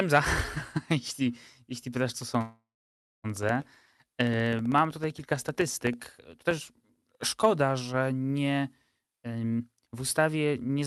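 Speech over a call path, with the top end stopping around 12 kHz the way Opus tends to. From 2.09 to 7.28 s there are periodic USB or driver dropouts: roughly a millisecond of silence every 64 ms, around seventy regular ticks riding on the sound. At 2.41 to 3.26 s there's a call audio freeze, likely from held-up packets draining the jitter buffer. The last sound smears into a fading buzz, then goes about 0.59 s silent before picking up where it stopped, so nothing is lost but things end up about 0.83 s later. Then from 8.98 to 10.83 s a jitter buffer speed-up kicks in, snipping pitch-period chunks to play at 144% speed without changing pitch, so the talking sounds rushed as roughly 0.7 s gets trimmed out.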